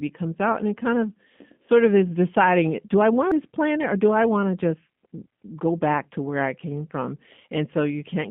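Throughout, the speech has passed through a G.729 codec, which rebuilds each 10 ms frame from a vocal tract filter, a pitch predictor and a few pulses. The band runs only from 150 Hz to 3.6 kHz, and the plainly audible rough, synthetic grain fits an 8 kbit/s link.

At 3.31 s, after "deciding do I want", a CD skip throws the laser to another turn of the disc. Playback mutes for a very brief moment, heard as a tick, and resumes from a different point at "this planet or do".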